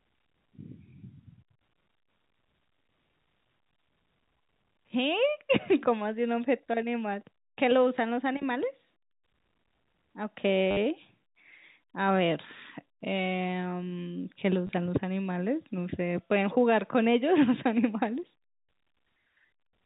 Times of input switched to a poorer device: none

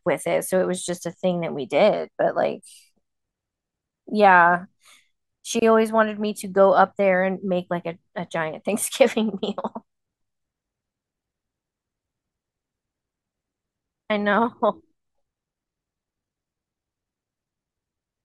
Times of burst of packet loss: none

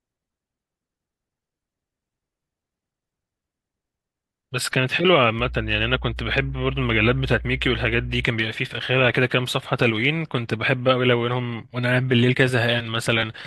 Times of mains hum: 5.39-8.25

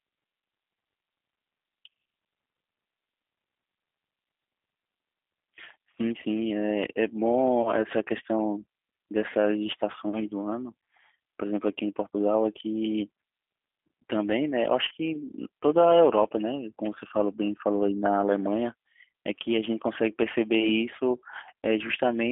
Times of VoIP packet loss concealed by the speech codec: 7.62-7.70, 14.88-14.92

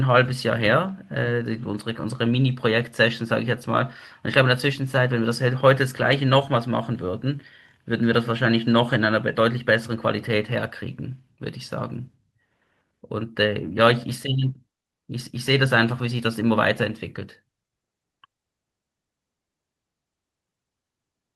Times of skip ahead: none

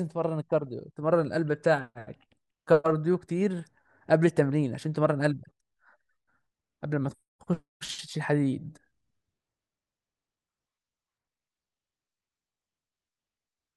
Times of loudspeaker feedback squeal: none

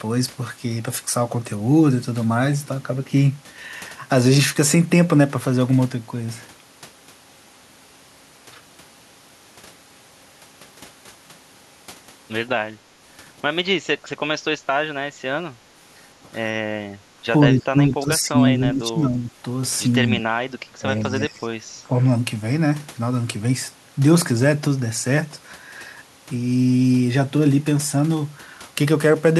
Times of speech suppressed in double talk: 14.03-14.08, 17.48-19.30, 20.22-20.26, 20.80-22.02

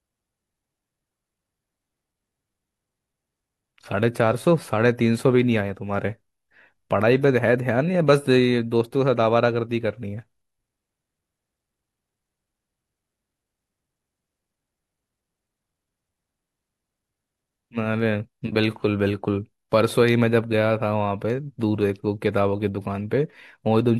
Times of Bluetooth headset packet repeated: none

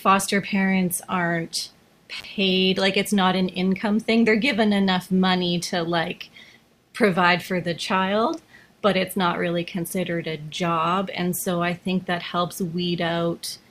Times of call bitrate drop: none

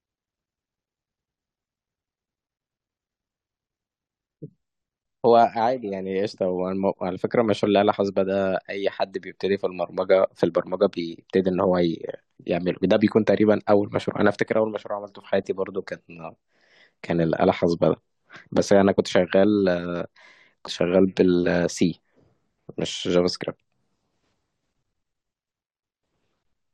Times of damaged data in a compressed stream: 7.65, 20.66

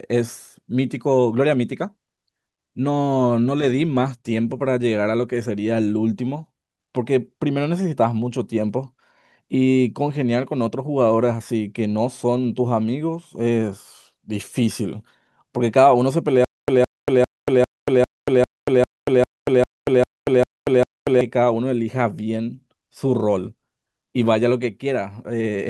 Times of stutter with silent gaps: 16.44-21.21

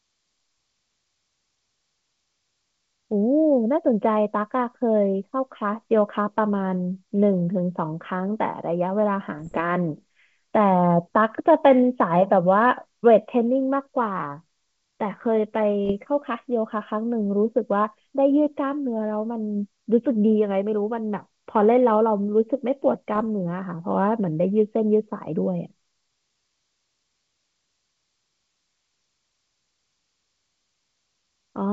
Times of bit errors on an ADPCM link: 9.39-9.61, 15.85-15.92, 23.14-23.22

